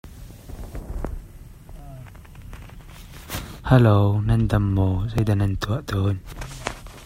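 At 1.79 s and again at 5.18 s, the capture side likely suffered a dropped buffer (overrun), with samples overwritten before being collected. Roughly 20 ms of speech vanishes each time, and the surrounding audio butts together, giving an abrupt jump forward.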